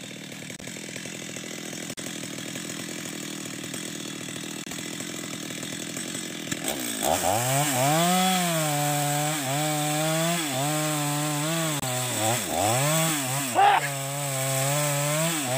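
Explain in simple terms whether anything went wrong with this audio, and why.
Something did go wrong: five short chirps or bursts of noise at 0.56–0.64 s, 1.93–1.99 s, 4.64–4.74 s, 6.51–6.54 s and 11.80–11.86 s. Each is a corrupt frame decoded. A few small blocks of the compressed data got damaged, and the player decoded them anyway. The scrambled values put sound at the wrong pitches for a fraction of a second. The later bursts are noticeably louder.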